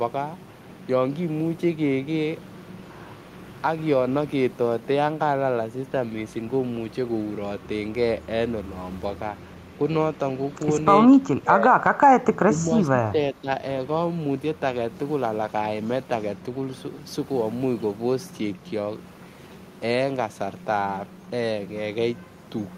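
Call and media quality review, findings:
Speech level dips at 11.12–11.19 s (about 10 dB) and again 11.35–13.48 s (about 15 dB). Probable component: echo canceller, likely speech suppressed in double talk, with near-end talker attenuated along with far-end echo while both sides spoke.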